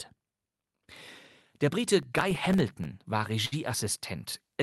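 From 2.03 to 2.85 s there's processor overload crackle: the CPU keeps missing deadlines on tiny buffers of a millisecond or two, dropping silent gaps that add up to a gritty tearing. Then at 3.45 s a short stall from a late packet appears. The jitter buffer ran dry, so the sound gets held for 66 ms before carrying on with nothing lost.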